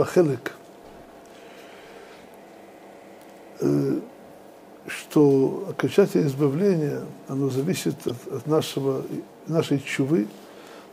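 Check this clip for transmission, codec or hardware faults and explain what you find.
One transmission fault is present: a short stretch of damaged data in the compressed stream, from 8.06 to 8.11 s. At that point the bytes feeding the decoder are corrupted, so it cannot read those frames correctly. It loses sync and scans forward for the next valid frame header before normal decoding resumes. The result is a brief glitch of about 40 ms, a short blip in the sound.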